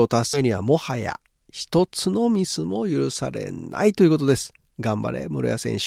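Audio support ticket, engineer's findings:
Skip ahead at 0.33 s: about 0.7 s of speech gone, with the two sides butted together with no gap. The jitter buffer probably overflowed and dumped queued audio.

Jitter buffer speed-up, 0.43 to 2.90 s: speech runs at 108% with unchanged pitch. The buffer trimmed pitch-period slices, roughly a fifth of a second in total, to shed excess delay.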